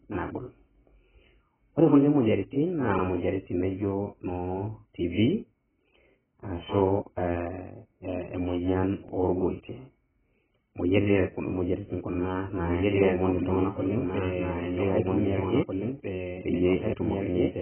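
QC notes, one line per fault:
Throughout: AAC compression. Nothing is heard above 3.1 kHz. The speech sounds dull and smeared. Sibilants and held vowels have a warbling, fizzy texture. The damage is heavy, which fits a very low bitrate of around 9 kbps. The likely cause is AAC-LC coding. It quantises each frame's spectrum against a hearing model. With so few bits, it drops the top band and leaves holes or noisy patches in what remains.
12.13–12.18 and 15.18–15.23: overlapping chunks. At each of these two joins, a short stretch of about 48 ms plays twice. It is heard as a brief stutter or click at the seam. The joins fall 3.0 s apart. This fits audio handled in 3-second chunks, where each chunk starts slightly before the previous one ended. The overlap is replayed rather than discarded.
12.66 to end: doubled audio track. A second full-band copy of the speech cuts in abruptly and runs to the end of the clip. 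It trails the original by about two seconds and is about 5 dB quieter. It has no reverb tail and no room colour, so it sounds like a clean duplicate rather than an echo. The likely cause is the same audio being captured again by a slower path.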